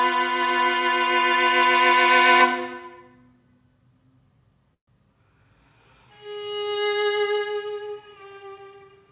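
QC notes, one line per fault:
4.74–4.89 s, call audio freeze: the sound stalls and is held as a brief fading buzz that sinks to silence for about 100 ms, then resumes exactly where it left off, so the rest of the clip runs about 133 ms late. The likely cause is packets held up in transit, draining the jitter buffer. Unlike a packet-loss dropout, nothing is skipped: a gap is inserted, not content removed. The call audio is band-limited, with nothing above 4 kHz as fits G.711 mu-law at 64 kbps.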